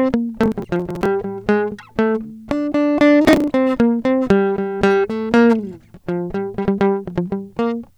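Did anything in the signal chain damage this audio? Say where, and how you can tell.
Yes, at the driver or buffer stage: processor overload crackle. Gritty tearing rides over the music from 0.44 to 1.06 s and again from 3.25 to 3.48 s. Buffers of about 10 ms miss deadlines and are skipped, leaving hard-edged gaps.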